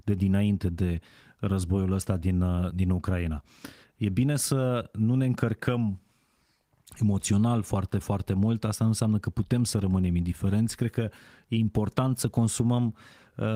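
Nothing goes wrong anywhere in this speech recording, and the light Opus voice compression it passes through, which fits a full-band hybrid stream at about 24 kbps, is just doing its normal job.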